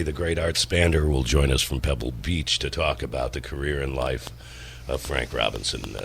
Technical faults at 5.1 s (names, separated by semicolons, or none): train of clicks